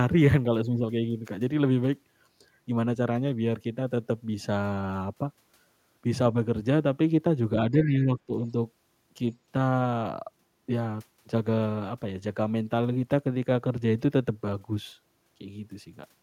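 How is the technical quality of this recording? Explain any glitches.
The recording has three short echo-control glitches, all between about 7.7 and 8.5 seconds.

From 7.71 to 8.32 s and again at 8.48–8.54 s, there is speech suppressed in double talk: the voice dips by roughly 10 dB, then about 5 dB, likely because the echo canceller clamped down while both sides spoke.

From 7.83 to 7.87 s, a faint scrap of the other side's voice leaks through, roughly 20 dB below the speech, likely residual loudspeaker echo the canceller missed.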